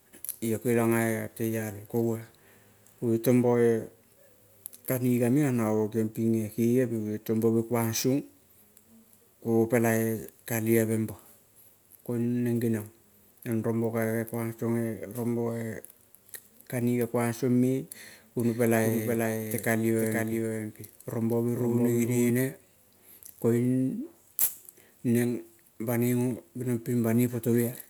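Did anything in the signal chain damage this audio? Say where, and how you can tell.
Yes. From 18.38 s to 22.3 s the speech is doubled: a second full-band copy trails the original by roughly half a second, sitting a few decibels below it, about 5 dB down. This is a doubled audio track. The trailing copy has no decay or room colour, which rules out an acoustic echo, and it switches on and off abruptly at both ends. The likely cause is a slower second capture path or an edit that left two misaligned copies mixed together.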